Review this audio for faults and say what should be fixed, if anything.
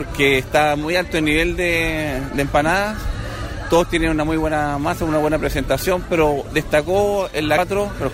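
At 7.57 s there is a very short blip, lasting about 14 ms, caused by damaged data in the compressed stream. Data at that point was lost or overwritten, so the decoder misread the affected frame, lost sync and had to find the next frame header before it could resume. On a spectrogram it shows as a thin vertical broadband streak, and the waveform has a brief jagged discontinuity. To prevent it, verify the file's integrity after transfer and re-encode or re-fetch it from an intact source.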